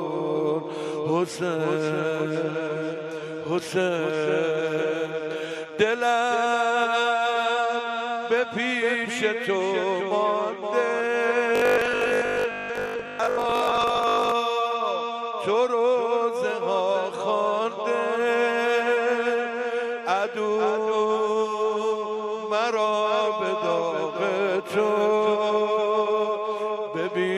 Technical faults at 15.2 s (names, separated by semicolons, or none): none